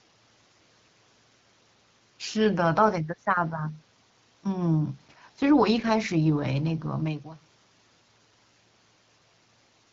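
No technical faults can be heard in the speech here.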